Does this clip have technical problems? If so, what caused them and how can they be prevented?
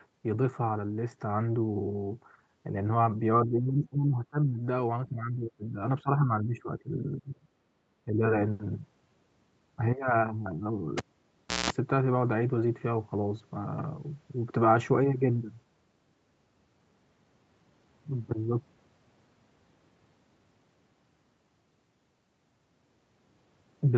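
Yes. Speech was likely suppressed in double talk: an echo canceller, unable to separate the talker from far-end echo, cut the speech by up to about 20 dB at 3.46–4.6, 5.05–5.78, 6.03–7.46 and 8.05–8.22 s. Using headphones, or a better-tuned echo canceller, prevents this.

A cable was pulled and plugged in at 10.98–11.70 s: a pop, about 0.67 s of near silence, 0.18 s of 60 Hz buzz, then another pop. Securing connectors and never re-patching live lines prevents it.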